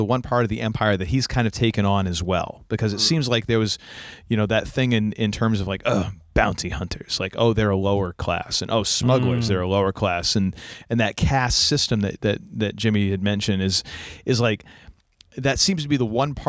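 Speech, no technical faults found.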